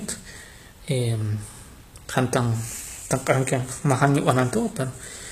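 Throughout the speech, s sounds are gritty and lispy. The treble is copied up from lower bands, likely HE-AAC compression near 20 kbps. Nothing lies above 14.9 kHz.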